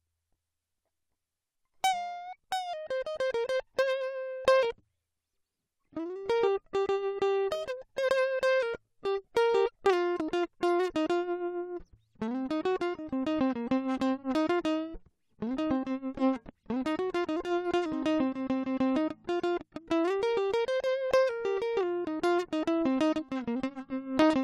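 At 6.86 s the music gives a single sharp tick, a hole of about 5 ms too brief to hear as a gap. It is a block of digital silence: a run of samples dropped to zero with no fade, probably an output buffer not filled in time.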